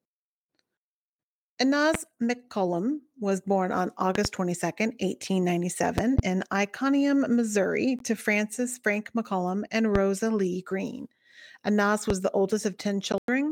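At 1.94 s a loud pop jumps out, roughly 15 dB above the speech, likely a voltage spike from a switch, static or a driver glitch. The speech carries on underneath. There are more at 4.15 s and 5.98 s (double pops), then single ones at 9.95 s and 12.10 s.

Meanwhile there's a Bluetooth dropout at 7.99 s, about 15 ms of silence, likely packets missing the headphones in time. A worse one at 13.12 to 13.28 s chops out about 116 ms in bits, fitting several lost packets, and the speech resumes mid-stream.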